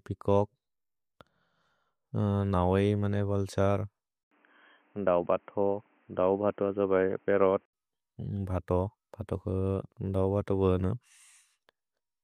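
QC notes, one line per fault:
4.23–7.73 s, input switched to a poorer device: after a gap of about 80 ms at 4.23 s, the speech turns dull and boxy, with nothing above 3.2 kHz, a new noise floor roughly 40 dB below the speech, and little change in level. Full bandwidth returns at 7.73 s. The likely cause is the recording input moving to a narrower-band microphone or headset call profile, which carries its own tone and background noise, then switching back.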